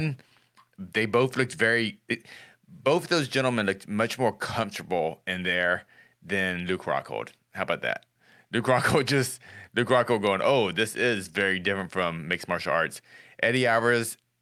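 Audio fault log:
No faults can be heard anywhere in this speech clip. Nothing in the sound calls for a timed entry.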